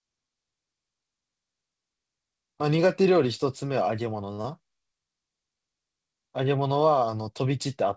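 At 4.34 s the speech catches and holds: the sound in progress is drawn out for a moment, with a faint buzzy, slightly sunken quality, before it carries on from where it left off by 4.40 s. This is a short stall from a late packet. The next chunk of audio had not arrived in time, the jitter buffer ran dry, and the receiver padded the gap by stretching the last sound for roughly 39 ms. Nothing is lost, but everything after plays about 39 ms later than before.

Almost immediately afterwards, from 4.42 to 4.46 s, there is a brief smear, a quick wobble where the sound blurs instead of moving cleanly to what follows. This is short concealed packet loss: about 20 ms of audio never reached the decoder, and the receiver filled the hole by extending the preceding sound for about 21 ms before blending back into the real signal. The two events come close together. The call path underneath, whose content stops at 8 kHz, which fits G.722 at 64 kbps, gives both a slightly muffled top end.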